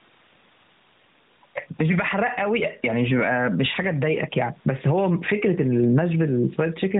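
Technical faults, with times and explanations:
Throughout, gain pumping: the level of the whole clip keeps lurching. Every time the speech gets loud, the gain swings by roughly 10 dB. That's likely the input gain set well too high and a fast limiter or compressor clamping down on each loud moment and letting go right after. Loud and quiet passages end up squeezed close together, so the speech sounds flattened. The room noise sits about 42 dB below the speech. The narrowband mobile codec cuts everything off above 3.8 kHz.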